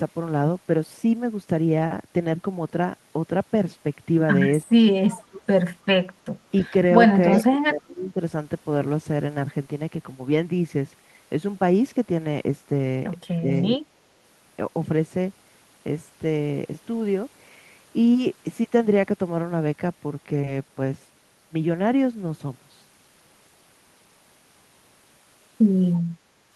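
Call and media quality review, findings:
Echo leak, 5.08–5.42 s at about -20 dB and 7.32–7.38 s at about -30 dB. Faint delayed copy of the talker trailing 322 ms behind, likely residual from far-end loudspeaker past the echo canceller. Spectrogram: ghost harmonics offset 322 ms, weaker.

Speech suppressed in double talk, 7.38–8.2 s (up to about 20 dB down, roughly 0.7 s affected) and 13.4–13.48 s (about 15 dB down). Near talker dips while the other side speaks. Likely echo canceller attenuating both the talker and the loudspeaker echo. Waveform: envelope notches.

Short concealed packet loss, 20.41–20.49 s. Two back-to-back 20 ms gaps, filled over 14 ms and 21 ms by decoder concealment extending the prior sound. Brief smear or wobble. Spectrogram: crossfade seam back into real signal.

Background gated by the echo canceller, 26.19–26.54 s. Room tone dips about 6 dB for roughly 0.4 s, then recovers when the canceller releases. 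Waveform: step down in the noise floor. Spectrogram: uniform broadband darkening, abrupt edges.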